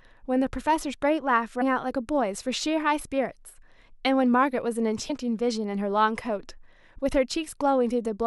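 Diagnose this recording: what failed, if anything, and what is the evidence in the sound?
Compressed frames skipped, a codec-stage fault: at 1.60 s the speech jumps ahead about a tenth of a second, and at 5.09 s roughly 70 ms, which fits whole 23.2 ms frames being lost. Overlapping frames smear each join into a soft blip, not a buffer dropout's hard click or gap.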